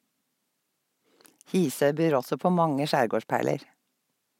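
No technical faults are audible anywhere in the recording.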